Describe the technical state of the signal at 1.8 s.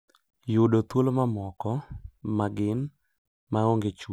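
At 1.8 s the signal is intact, with no audible technical fault at that point.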